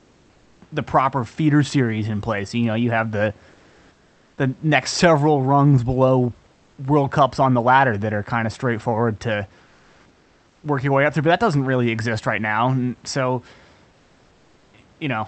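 Comfort noise in place of the background appears in this speech recording at 0 to 0.61 s (before "the proper feeder series"), 3.51 to 4.37 s (after "know you have the"), 6.51 to 6.77 s (after "next several rungs below"), 9.65 to 10.63 s and 13.91 to 14.73 s. During each pause the room noise gives way to a flat, featureless hiss up to about 3 dB quieter. The likely cause is Opus discontinuous transmission, where the receiver synthesises noise while the sender stops transmitting.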